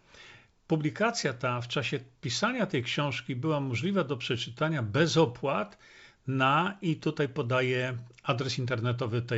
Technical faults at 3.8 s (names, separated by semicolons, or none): none